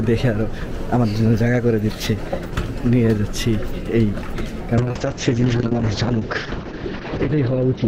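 From 4.79 s to the end there's a call bitrate drop: the audio goes rough and muffled, with highs cut near 6 kHz, which points to the encoder falling to around 7 kbps.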